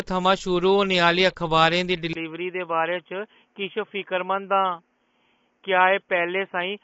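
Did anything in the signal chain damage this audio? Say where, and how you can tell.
Yes. At the codec stage, the audio was likely squeezed through low-delay AAC compression at a low rate. Throughout, the sound is rough and grainy with noise between harmonics, and nothing above 7.7 kHz, which fits AAC-ELD's short frames starved at around 24 kbps.

At capture, the input was likely switched to a poorer device at 2.13 s, right after "अखबारें दी". A brief 20 ms gap marks the switch. From there the band stops near 3.4 kHz, the level drops roughly 5 dB, and a new noise floor appears about 45 dB down.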